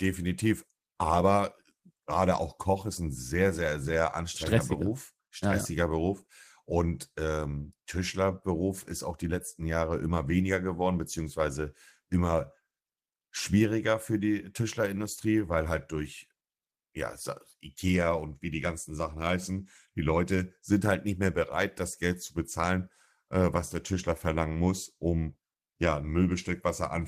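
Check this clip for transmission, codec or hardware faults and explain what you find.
The speech signal arrives intact and steady, with nothing audible that points to a problem anywhere between capture and playback.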